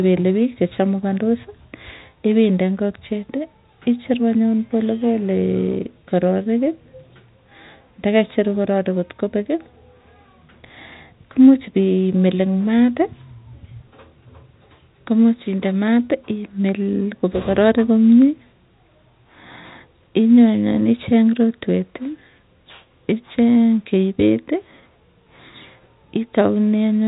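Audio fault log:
No faults are present in the speech, which carries the band-limited sound of G.711 telephone coding, with nothing above 3.8 kHz and at most faint coding noise, consistent with a 64 kbps mu-law path.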